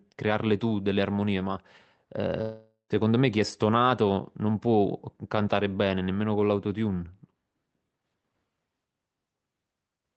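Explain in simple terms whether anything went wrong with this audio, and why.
A long network dropout likely broke the stream from 2.41 to 2.93 s. The last sound fades as a buzz, and that speech is lost.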